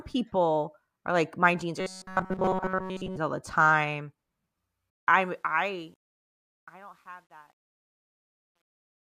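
A short speech recording with two faults. From 1.81 to 3.17 s the sound turns into a rigid, metallic robotic buzz at 188 Hz, likely from repeated short buffers of about 5.3 ms replaying entirely in place of new audio. A spectrogram shows evenly spaced 188 Hz harmonic lines, and the waveform shows identical repeating cycles. From 4.90 s to the end at 9.02 s, the smooth fade-out shows truncation distortion consistent with an 11-bit stage without dither, worst from 6.36 to 9.02 s. There the waveform breaks into square steps, and the spectrogram shows broadband grit.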